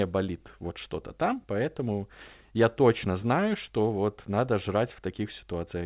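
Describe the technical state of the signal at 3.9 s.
At 3.9 s the speech sits inside a run of repeated timing corrections that lasts from 0.05 s to 5.76 s. The receiver keeps trimming short pieces to catch up, so playback runs at 104 percent. Each cut is small.

Behind this is clock drift between sender and receiver, present throughout. The sender's clock runs roughly 4 percent fast. The receiver's jitter buffer keeps overfilling, which forces those cuts at irregular spacing. The call path itself leaves nothing above 4 kHz, which fits a G.711 A-law codec.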